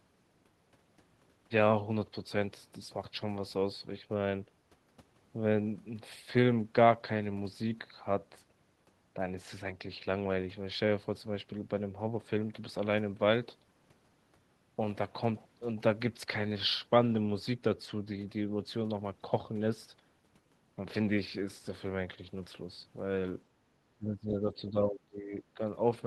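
The speech clip shows speech suppressed in double talk, likely because the echo canceller mistook this talker for loudspeaker echo while the far side was also speaking, and turned both down together. From 23.97 s to 25.6 s the voice sinks sharply, by around 20 dB at its deepest, with roughly a second and a half of the sound held down before it recovers near the end of the recording.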